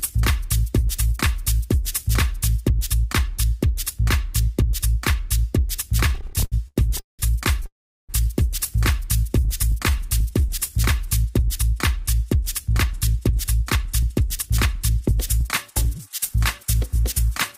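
Repeated stalls (stutter) run from 6.09 to 7.21 s. Packets kept arriving late, so the jitter buffer emptied 16 times, and the receiver stretched the last sound to fill 475 ms, 43% of that stretch, with the longest hold lasting 190 ms. The audio drags and stutters, but nothing is lost.

A call audio freeze follows at 7.66 to 8.11 s. The sound stops and is carried on for 430 ms, 380 ms of it silent, before resuming where it left off. The likely cause is packets held up in transit, which drained the buffer and added 430 ms of delay.

A jitter buffer slow-down runs from 9.29 to 10.73 s. To rebuild its reserve, the receiver repeated single pitch periods and pieces of pauses, adding 95 ms in total. The audio plays at 94% speed with its pitch unchanged, so sounds are drawn out.

A jitter buffer speed-up runs from 12.83 to 17.53 s. The buffer had built up more audio than its target, so the receiver cut short pieces of pitch periods, removing around a fifth of a second in all. 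The audio plays at 104% speed with its pitch unchanged.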